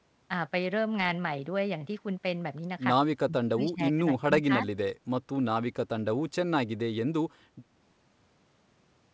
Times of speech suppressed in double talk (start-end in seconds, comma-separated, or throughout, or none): 3.26-4.29